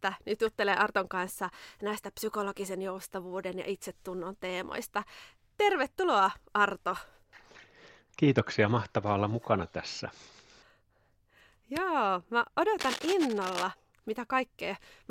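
From 12.79 to 13.65 s, cable scratch noise scrapes and rustles over the speech, about 10 dB below it, likely from a worn cable or connector whose contact resistance jumps as it moves. A spectrogram shows ragged broadband streaks, and the waveform shows spiky, irregular bursts.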